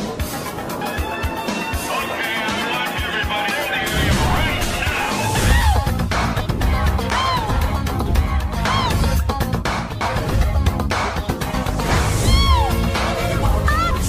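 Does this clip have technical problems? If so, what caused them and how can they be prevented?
Yes. Short glitches cut into the sound at 0.82, 3.51, 8.06 and 10.01 s, with a slightly longer one from 13.91 to 14.00 s. This is damaged data in a compressed stream. Bytes in those stretches were lost, zeroed or overwritten, so the decoder misread the affected frames, lost sync and had to hunt for the next valid frame header. Checksummed transfers, reliable storage and keeping metadata out of the audio payload prevent it.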